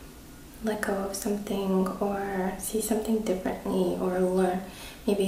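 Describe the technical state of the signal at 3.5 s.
A single sharp click sounds at 3.46 s. It is likely dropped samples: a fraction of a millisecond goes missing, so the waveform jumps abruptly.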